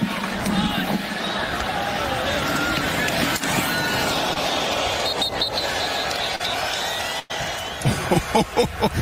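At 4.33 to 4.38 s and again at 6.36 to 6.41 s there is a brief smear, a wobble where the sound seems to stretch instead of moving on. These are short concealed packet loss. About 20 ms and then about 40 ms of audio never arrived in time, so the decoder filled each hole by extending what came just before and then eased back into the real signal.

From 7.19 to 7.32 s the last sound is carried on and sags in level before the audio picks up again a little further along. This is a burst of packet loss. Roughly 100 ms went missing in one run, so the receiver carried the last sound forward and faded it as the gap lengthened. When playback resumed, that tenth of a second was simply gone.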